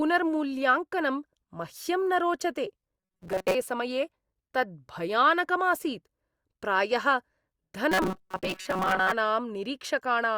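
Audio most likely arrived too seldom during two stretches, so the playback side filled each gap by looping a very short piece, about 5.3 ms, while most of the real speech in between was skipped. That loop sets a fixed 188 Hz buzz over the voice, giving robotic sound from repeated short buffers from 3.00 to 3.55 s and again from 7.92 to 9.12 s: a rigid, metallic drone that still loosely tracks the speech.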